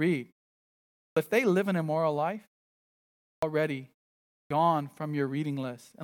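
The output device drops into a low-power state during each silence and has to wake and relock before it passes audio again, producing a clipped start after a pause three times. About 95 ms is swallowed at 1.07 s after a 0.83 s pause, about 95 ms at 3.33 s after 0.94 s, and about 104 ms at 4.40 s after 0.54 s. Each time, speech bursts out of silence with its opening sounds missing, while the pauses themselves fall cleanly quiet.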